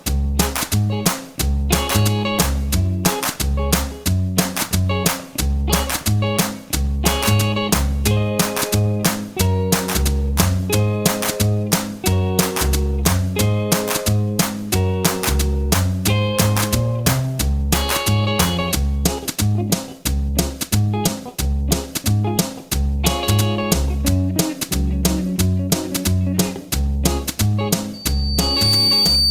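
Loudspeaker feedback squeal starts at 27.93 s and runs to the end at 29.31 s. A microphone is picking up its own loudspeaker, and the loop gain exceeds one at 4.6 kHz, so a piercing tone swells within a second to sit a few decibels above the sound.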